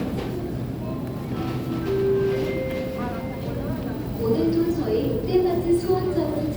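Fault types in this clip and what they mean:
No audible faults present.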